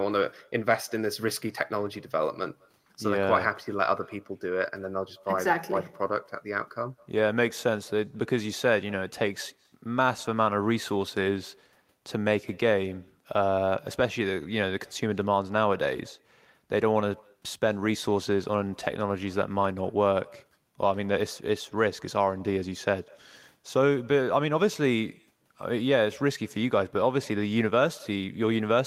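From start to end, echo with no canceller: the far end's loudspeaker feeds the speech back into its microphone, and it returns a fifth of a second later, about 28 dB down. Unlike room reverberation, it is a distinct, thin, delayed copy rather than a smooth tail.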